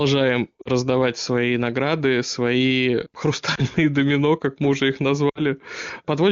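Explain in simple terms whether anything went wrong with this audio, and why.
Lost AMR speech frames cause three brief glitches. At 0.62 to 0.68 s, before "свои награды свои", at 3.55 to 3.60 s, before "домино как мы уже", and at 5.29 to 5.41 s, after "как мы уже их", the voice briefly cuts out. At the first and last it drops to near silence, and at the second it dips or warbles. Radio errors spoiled small chunks of speech, and the decoder filled each gap by stretching the last good sound while fading it.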